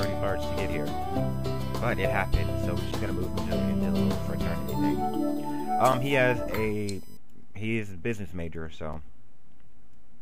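From the start until 7.17 s, a thin, fixed-pitch whine sits roughly 30 dB below the sound. This is USB whine: the bus's 1 kHz frame rhythm leaks through power or ground, peaking at its 17 kHz harmonic. At 2.92, 5.92 and 8.93 s, 7 ms holes break the sound. These are gaps between chunks, silence left at each join between 3-second blocks as they were sent or played.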